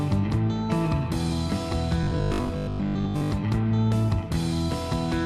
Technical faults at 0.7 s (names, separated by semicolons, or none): none